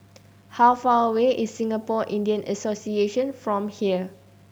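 Low bit depth without dither runs through the whole of this speech clip. Quiet passages and decaying word endings turn gritty, the softest moments sputter between adjacent levels or drop out entirely, and the graininess shifts with the sound rather than sitting underneath it as a steady hiss. Because the rounding error follows the signal, it is heard as distortion, not noise. It sits around 40 dB below the signal, which fits a 9-bit signal that was likely rounded without dither.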